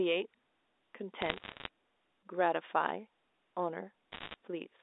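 Bit errors on a digital phone line flip samples in this telephone speech from 1.22 to 1.68 s (error rate about 0.7%) and from 4.12 to 4.34 s (nearer 1.5%), putting sharp ticks and crackle over otherwise unaltered speech, within the normal 300 Hz to 3.7 kHz telephone band.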